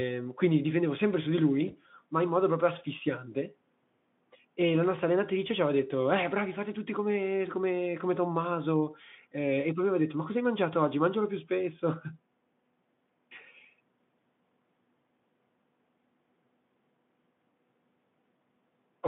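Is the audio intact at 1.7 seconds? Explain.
No. From 1.67 to 1.75 s, just after "difendevo sempre su di" and before "ma in modo proprio", there is VoIP packet loss concealed by the speech codec. About 20 ms of audio went missing, which fits a single lost frame. The Speex decoder filled the gap by extending its last pitch and filter settings at falling gain, so the speech briefly smears into a buzzy tone or coloured noise that fades, and stays weak or distorted until the decoder recovers.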